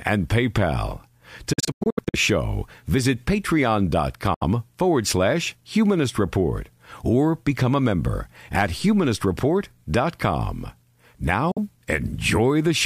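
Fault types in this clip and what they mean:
Bluetooth dropout: The wireless link likely failed to deliver audio packets to the headphones in time, so they were discarded and the output fell silent until good packets returned. From 1.53 to 2.16 s, just before "show visit", the speech breaks into scattered holes totalling about 350 ms, the longest near 93 ms. Losses of about 70 ms at 4.34 s, before "forward slash humanist report", and 46 ms at 11.51 s cut out the sound, with the sound resuming as if it had played on.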